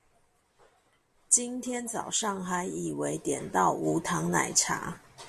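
No technical faults are audible anywhere in this speech recording.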